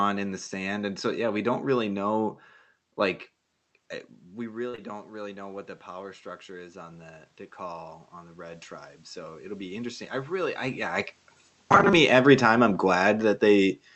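A speech recording, heard through a call codec that cuts off everything above about 8 kHz. Near 4.0 s, the talker moves back and the level at the microphone falls by about 14 dB. From 4.46 s to 10.40 s, automatic gain rising follows. The gain control hears the quieter input and slowly pushes its gain up by about 10 dB. Voice and room noise swell together across those six seconds, ending around "I yeah I". The gain never fully makes up the lost level. Inside that stretch come two short concealed packet losses. The first runs from 4.69 s to 4.75 s, just after "eh we", with about 40 ms of audio missing. The second follows at once, 4.75 s to 4.80 s, with about 20 ms missing. Both holes are patched by stretching the last sound forward, then blending back. The result is a brief smear or wobble of about 60 ms. A short sound there may be lost. From 11.59 s to 11.93 s, after "I yeah I" and before "me every time I'm", the voice turns into robotic sound from repeated short buffers. 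It becomes a rigid, metallic buzz at 200 Hz. That pitch fits a 5 ms chunk replayed over and over. Most of this stretch is repeated audio rather than new speech. The likely cause is audio arriving too seldom, so the player loops its last small buffer to fill the gaps.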